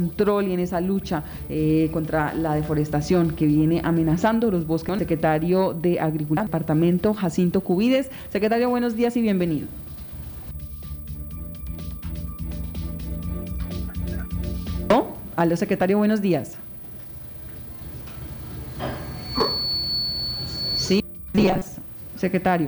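Near the end, from 21.36 to 21.68 s, the sound turns into a rigid, metallic buzz at 188 Hz: robotic sound from repeated short buffers, likely from a roughly 5.3 ms chunk replayed while most of the real audio is skipped. Unlike a dropout, there's no silence, only a fixed-rate buzz that follows the original only roughly.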